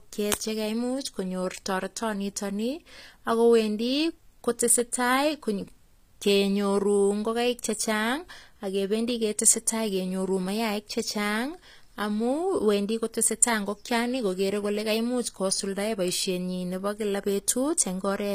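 Throughout the speech there is plainly audible codec damage, likely from HE-AAC compression at a low bitrate, which fits something near 24 kbps. The treble is synthesised from lower bands rather than coded, so sibilants sound gritty and metallic, and nothing remains above 15.5 kHz.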